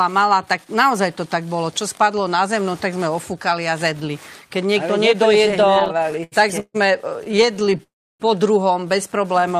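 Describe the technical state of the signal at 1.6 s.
At 1.6 s the signal is intact, with no dropout, clipping, glitch or other fault present at that moment.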